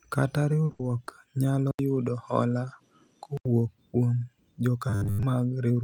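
A speech clip with several transmission faults. From 0.65 to 0.71 s and again from 1.05 to 1.09 s there are brief smears: short concealed packet loss, where the decoder bridged 40 ms and then 20 ms of missing audio by extending the preceding sound. Straight after the first, from 0.71 to 0.81 s, the sound hangs on and fades before resuming further on. This is a burst of packet loss, with about 80 ms concealed and that stretch of speech gone. From 1.71 to 3.45 s the audio drops out for 80 ms, then comes back duller, with a faint new noise floor, though the loudness stays about the same. This is most likely the input switched to a poorer device. From 4.90 to 5.23 s the speech turns into a rigid metallic buzz at 100 Hz, with most of the audio replaced by repeats. That is robotic sound from repeated short buffers, likely a 10 ms block being replayed while fresh audio arrived too slowly.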